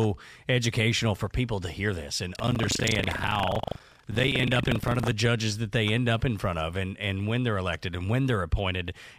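Buffer tearing runs from 2.32 to 5.13 s, heard as a robotic rattle at 25 Hz riding on the speech. The writer and the hardware reader of the ring buffer have drifted into each other, so every 40 ms period, which points to a buffer of that length, carries about a fifth of stale audio from roughly 150 ms earlier, spliced in with hard joins on both sides, producing the buzz.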